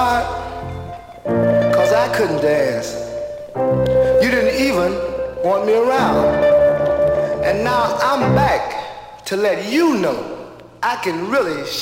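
No technical faults can be heard anywhere in the audio; the signal stays continuous and stable throughout.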